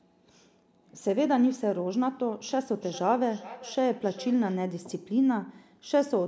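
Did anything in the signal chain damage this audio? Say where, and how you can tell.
Yes: from 2.75 to 4.67 s, feedback echo between two devices repeats the speech roughly every 0.4 s, about 18 dB below it. Unlike single-device echo, which its own canceller would remove, this is played by the other device, so no canceller removes it, and it comes back at a fixed interval.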